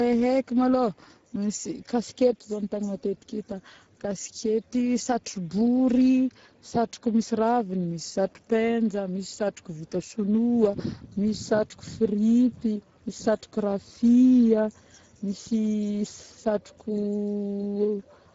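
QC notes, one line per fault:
Throughout: Speex codec. The speech comes out noisy and hoarse because this CELP coder has few bits left for the excitation. The rasp fits a rate around 10 kbps, and nothing at all gets through above 7.7 kHz.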